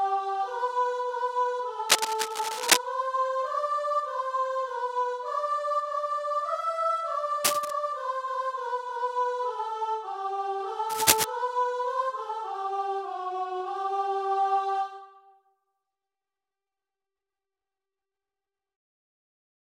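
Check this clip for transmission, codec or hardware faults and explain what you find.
Three short bursts of cable scratch noise stand out, from 1.89 to 2.77 s, 7.44 to 7.71 s and 10.89 to 11.24 s. Each is a dense, ragged rustle riding over the sound, slightly louder than the sound itself in the first and last bursts and roughly level with it in the middle one. The likely cause is a worn cable, connector or control being moved, its contact resistance jumping erratically and injecting that uneven noise.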